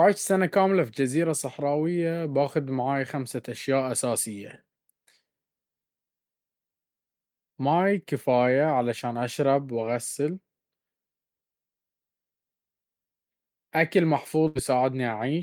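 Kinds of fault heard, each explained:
Burst of packet loss: near the very end, at 14.47 to 14.57 s, a run of audio didn't arrive in time, so the receiver stretched the last sound out for about 77 ms, fading it down, then jumped ahead with roughly 80 ms missing.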